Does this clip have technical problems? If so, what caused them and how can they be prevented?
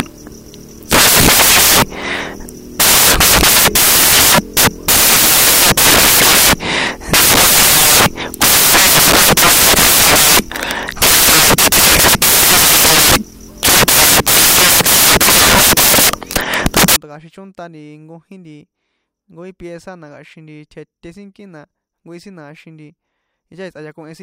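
Yes. Samples built from the wrong bytes, 0.00 to 16.96 s: each sample's bytes were assembled misaligned or swapped, so the fast-changing low bits dominate, producing loud white noise. Prevent it by verifying byte order and sample alignment before decoding.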